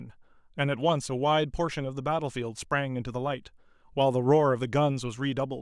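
No technical faults can be heard in this recording.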